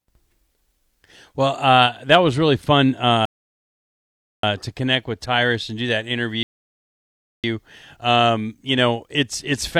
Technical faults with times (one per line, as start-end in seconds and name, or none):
3.25-4.43 rebuffering stall
6.43-7.44 rebuffering stall